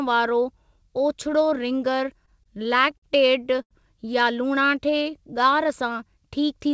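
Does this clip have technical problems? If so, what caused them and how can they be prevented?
Yes. From 2.26 to 3.04 s the speech stutters and drags through seven brief holds, the longest 50 ms. This is repeated stalls (stutter): packets kept arriving late, the jitter buffer kept emptying, and the receiver stretched the last sound about 122 ms in total. A larger or faster-adapting jitter buffer and a steadier network path would prevent it.

At 3.62 to 3.73 s one sound is held about 82 ms too long with a slight buzz or dip. This is a short stall from a late packet: the buffer ran dry and the receiver extended the sound until the packet arrived. Reducing network jitter, for example by prioritising the call traffic, would prevent it.

From 4.47 to 5.67 s the speech slows to about 91% speed at unchanged pitch, with drawn-out sounds. This is a jitter buffer slow-down: the receiver repeated pitch periods, adding 115 ms to rebuild its reserve. 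A steadier link, so the buffer needs fewer corrections, would prevent it.

The band limit at 8 kHz comes from the call codec, which sounds like G.722, and is expected for this kind of call audio.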